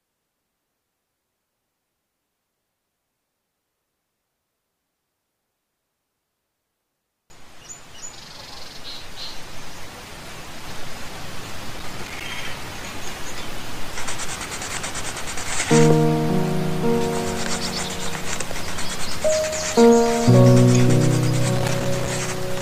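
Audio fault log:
11.75–12.29 s and 21.56–22.09 s: loose connector crackle. Each burst lasts about half a second. A worn or dirty contact is shifting and rapidly making and breaking. The signal is chopped, so it sounds like irregular scratching and crackle.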